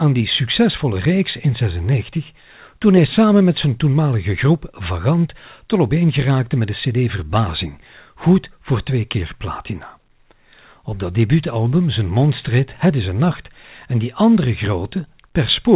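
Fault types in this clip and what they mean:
No faults present; the speech comes over a normal call path, with the band ending at 4 kHz, which fits G.711 A-law telephony coding.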